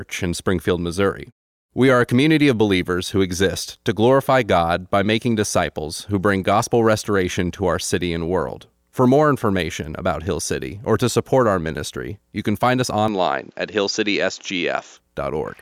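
At 13.08 s the speech abruptly loses its top end, with nothing above 7.6 kHz, and a faint new noise floor appears roughly 40 dB down, with no gap and no clear level jump. This is likely an input switched to a poorer device, lasting until 14.97 s.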